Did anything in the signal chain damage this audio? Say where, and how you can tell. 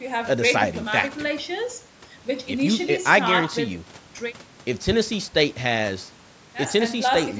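No, nothing in the signal chain damaged this speech. It went through a call's microphone processing, which leaves nothing above 8 kHz and trims the lowest bass as it is meant to.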